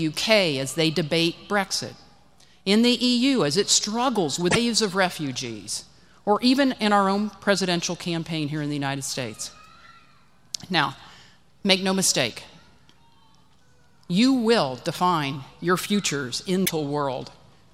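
At 4.48 s a burst of damaged data in a compressed stream breaks through for about 90 ms, ending at 4.57 s, and the same fault returns from 16.62 to 16.70 s for about 75 ms. In both places the decoder met corrupted frames, decoded garbage or lost sync while hunting for the next valid header, so the audio is briefly broken by a chirp, squawk, click or short hole.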